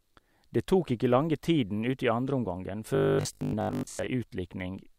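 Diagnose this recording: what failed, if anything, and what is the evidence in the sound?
Robotic sound from repeated short buffers runs from 2.95 to 4.07 s, after "tiden ut i andreomgangen", turning the speech into a rigid metallic buzz at 50 Hz. The likely cause is a starved driver buffer: a 20 ms block replayed in place of most of the real audio.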